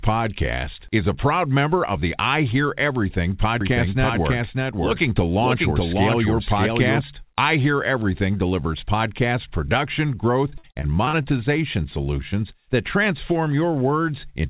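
From 3.61 s to 7.01 s a doubled audio track appears: a second, full-band copy of the speech, about as loud as the original, trails it by roughly 0.7 s, likely from a second capture through a slower path. It sounds like a dry echo of every phrase. On the spectrogram each pattern is repeated a fixed distance to the right, and the copy begins and ends abruptly.

Between 10.5 s and 11.26 s repeated packet loss gives the speech a choppy, robotic quality. A series of short holes, the longest about 56 ms, is patched by stretching the preceding sound, and about a quarter of this span is concealed this way. The waveform shows smeared, repetitive segments, and the spectrogram shows flat, buzzy bands of held harmonics. As with the rest of the clip, the spectrogram is empty above 4 kHz, which fits a narrowband call codec.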